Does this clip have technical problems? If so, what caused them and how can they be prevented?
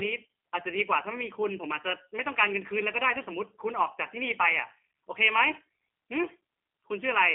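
Yes. G.729 codec damage runs throughout the speech: nothing passes above 3.8 kHz, and the rough, synthetic texture fits an 8 kbit/s G.729A stream rebuilding each 10 ms frame from a filter, pitch predictor and a few pulses. Using a wideband codec such as Opus would prevent it.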